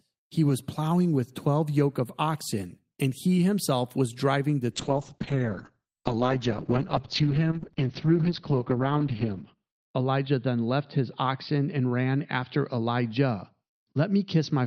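From 4.72 s to the end, a call bitrate drop from 32 to 8 kbps narrows bandwidth from 20 kHz to 6 kHz, leaving speech muffled and rough.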